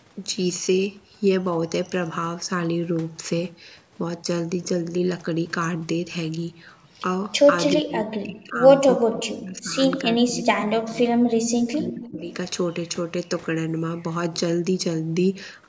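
A speech recording with call-style microphone processing, its spectrum stopping at 8 kHz, in which brief echo leak appears at 7.70–7.76, 10.55–10.60 and 12.04–12.11 s. A faint copy of the voice returns about 363 ms late, roughly 15 dB below the speech (about 20 dB at the last one), likely from a far-end echo canceller letting loudspeaker pickup through. On a spectrogram it shows as faint, shifted harmonic traces. Speech suppressed in double talk follows at 7.77–8.63, 8.97–9.79, 10.04–11.13, 11.44–11.48 and 11.72–12.29 s, where the voice dips or drops out, likely as the other side talks. The waveform envelope collapses by around 40 dB at worst, nearer 15 dB at 10.04 s, and the spectrogram shows gaps and a thinned upper band.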